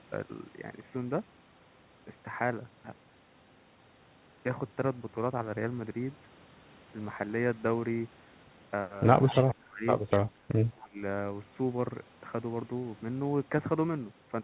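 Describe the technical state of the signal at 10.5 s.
Right around there, from 10.49 to 10.53 s, the speech takes a quick dip of roughly 10 dB, only about 40 ms long, so it sounds like a tiny duck or a clipped-off bit of the talker. That's most likely speech suppressed in double talk: with both ends talking, the echo canceller couldn't tell the talker apart from the loudspeaker echo and pulled the level down. The narrowband sound, with nothing above 4 kHz, fits a G.711 mu-law call path.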